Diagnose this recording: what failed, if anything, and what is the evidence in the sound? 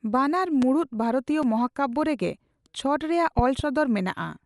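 The codec stage is dull throughout, with nothing above about 11.5 kHz and a rough, fluttering noise. This fits Dolby Digital compression, likely near 64 kbps, where starved frequency lines are filled with noise.

There is a loud pop at 0.62 to 0.65 s, roughly 10 dB above the speech. A double pop follows at 3.39 to 3.62 s, roughly 15 dB above. These are likely electrical transients in the analogue wiring, with the speech continuing underneath.

A block of digital silence about 5 ms long at 1.43 s gives a short tick. The sound cuts out and returns with no fade, pointing to the driver or buffer not being filled in time.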